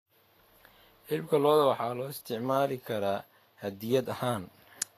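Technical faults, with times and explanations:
Throughout: Vorbis compression. The speech has nothing above 14.2 kHz, and the treble that remains is plainly damaged: it comes through hissy and grainy, voiced tones have a roughened edge, and consonant onsets sound smeared. This is likely low-quality Vorbis coding, consistent with a bitrate near 33 kbps. The encoder keeps a smooth outline of the spectrum but quantises the high-frequency detail on top of it so coarsely that it turns into noise of similar energy.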